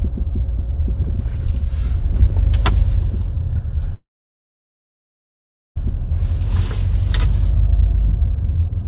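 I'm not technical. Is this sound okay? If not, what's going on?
No. From 3.94 to 5.78 s there's a call audio freeze: a brief fading buzz, then near-silence, likely from delayed network packets. The sound then resumes exactly where it stopped.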